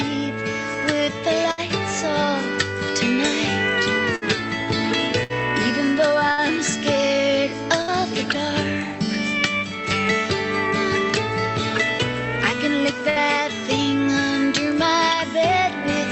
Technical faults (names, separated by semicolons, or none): burst of packet loss